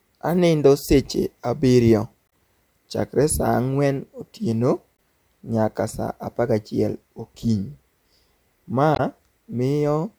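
A short chirp, squawk, click or hole breaks into the speech three times: from 2.27 to 2.32 s just after "sech abirio", from 4.95 to 4.99 s between "ang'wen otieno" and "nyaka saa apagachiel okinyi", and from 8.92 to 9.0 s. Each blip is damaged data in a compressed stream. Corrupted bytes in those frames make the decoder misread them and lose sync, producing a brief chirp, click or gap until it locks onto the next valid frame header.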